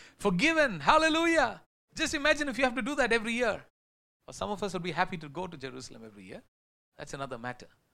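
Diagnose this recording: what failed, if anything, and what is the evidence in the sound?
Nothing in this speech recording has failed at any stage of the chain. In the pauses the output fades to silence, taking the background with it, then comes back in time for the next stretch of speech without clipping any of it, which is the muting working as intended.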